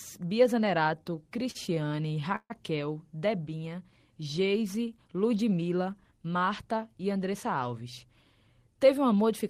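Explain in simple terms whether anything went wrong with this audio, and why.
Between 0.99 and 2.52 s the speech has repeated stalls, a stutter. Packets kept showing up late, so the playback buffer ran dry 18 times. Each time the receiver stretched the last sound to fill the wait, the longest for 141 ms. Nothing is lost, but it drags.

From 5.51 to 6.26 s there's a jitter buffer speed-up. Too much audio had piled up, so the receiver trimmed tiny slices, about a tenth of a second in all. The speech runs at 111% speed, same pitch, and sounds a bit rushed.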